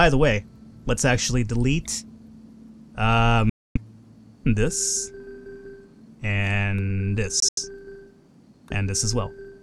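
The sound cuts to silence from 3.50 to 3.77 s, then resumes as if it had kept playing. Around 7.40 to 7.59 s, shorter holes break it up, the longest about 85 ms. These are likely Bluetooth dropouts, with late packets to the headphones discarded.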